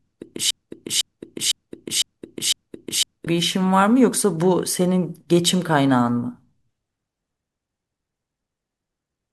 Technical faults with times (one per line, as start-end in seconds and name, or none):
0.50-3.27 broken-record loop